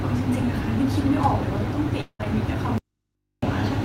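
Speech clip with three faults clustered near its end. From 2.01 to 2.21 s the audio stops and the last sound trails off as a fading buzz or hiss, then briefly goes silent. This is likely a long network dropout, with about 0.18 s of speech lost. Right after, from 2.21 to 2.24 s, a short concealed packet loss leaves a brief smear. The receiver bridged about 10 ms of the 20 ms of missing audio by extending the preceding sound. From 2.78 to 3.43 s the speech cuts out abruptly for about 0.65 s. Only a faint mains hum remains, far below the speech level. This is likely an audio dropout to a faint residue, with the path staying live after the signal was lost.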